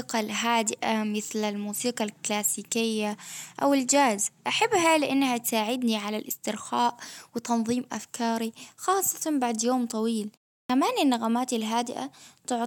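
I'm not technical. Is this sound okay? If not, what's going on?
No. At about 10.64 s, just after "خاصة بعد يوم طويل" and a short pause of about 0.35 s, the next bit of speech begins abruptly, with roughly the first 56 ms cut off. This is a clipped start after a pause: the playback device dozes off during the brief silence and wakes a moment too late. Muted pauses sound different: the background goes quiet during the gap, but the speech that follows arrives whole.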